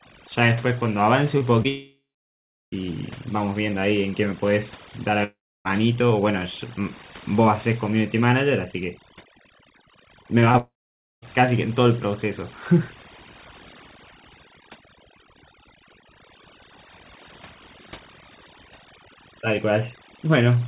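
Overdone noise removal runs throughout the speech. Aggressive band-by-band suppression leaves the voice over near-silent gaps, seen as isolated twinkling specks on the spectrogram, which shows nothing above 4 kHz from the narrowband call path.

Two short concealed packet losses fall at 1.38 to 1.42 s and 1.62 to 1.66 s. Each roughly 20 ms hole was filled by extending the previous sound, heard as a brief smear, with a smoothed patch in the waveform.

A long network dropout, likely the cause, starts at 1.68 s. A fading buzzy continuation of about 0.3 s gives way to flat silence of about 0.72 s before the speech resumes at 2.74 s. A shorter one at 5.24 to 5.67 s fades into about 0.31 s of silence.

Scattered short gaps, about four of them, each around 20 ms, cause small hiccups and thin vertical seams from 10.23 to 11.27 s. Within that stretch, a long network dropout spans 10.58 to 11.24 s, with about 0.52 s of flatline silence.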